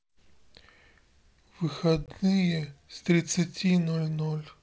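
At 2.06 to 2.09 s, the speech drops into a hard-edged hole about 20 ms long. This is packet loss on an ADPCM call, roughly one packet's worth. The gap is filled with silence. The decoder's predictor and step size then no longer match the sender's. When the speech returns, it comes back with brief, slight distortion, settling over tens of milliseconds. The clean 7 kHz wideband of the G.722 coding surrounds it.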